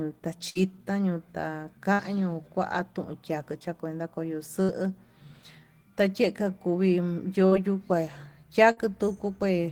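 Five bursts of packet loss break the speech, at 0.49–0.58, 1.93–2.02, 4.63–4.72, 7.46–7.54 and 8.71–8.80 s. Each time about 60 ms went missing, and the receiver stretched the preceding sound over roughly 55 ms, fading it. Voiced stretches become a short buzz, unvoiced ones a dying hiss, then the speech jumps ahead. A spectrogram shows flat, smeared harmonic bands tapering off, and the waveform shows a decaying repeated cycle before an abrupt resumption.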